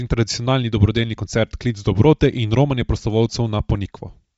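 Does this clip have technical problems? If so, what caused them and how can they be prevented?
Yes. The audio was likely carried over a Bluetooth LC3 compression link at a low bitrate, consistent with about 32 kbps and 10 ms frames. This strips the upper spectrum and noise-fills it, so throughout the speech there is nothing above 7.7 kHz and a plainly audible breathy, grainy edge. To prevent it, record locally or over a wired connection, or set the Bluetooth link to a higher-bitrate LC3 configuration.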